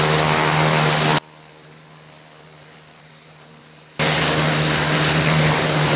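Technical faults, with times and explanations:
1.18 to 3.99 s, one channel inverted: the sound drops by about 28 dB and turns faint, then returns. The likely cause is one channel flipped in polarity, so the shared content cancels in the mono sum. The call path's 4 kHz band limit persists throughout.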